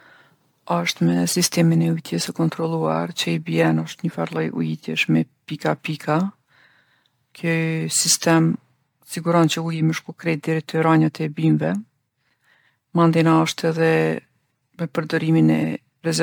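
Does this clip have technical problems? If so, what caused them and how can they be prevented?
Yes. Generation loss runs through the whole speech clip. It sounds swirly, hollow and smeared, and consonant attacks are blurred. This is likely from roughly seven rounds of MP3 encoding. The sound points to bitrates near 100 kbit/s, with each pass re-quantising on a shifted frame grid. On a spectrogram this shows as flickering spectral holes and nothing above 19.9 kHz. Prevent it by keeping a lossless master and encoding to MP3 only once, at the final step.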